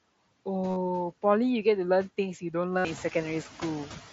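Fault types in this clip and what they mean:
noise suppressor artifacts: frame-by-frame gain cuts steady noise about 17 dB, so spectrograms show the noise floor dipping between speech, rising beneath it.
concealed Bluetooth headset packet loss: lost headset packets get patched with repeated recent waveform, scattered at 0.70–0.76 s and 67.5 ms lost at 2.78 s, visible as regular repeated cycles.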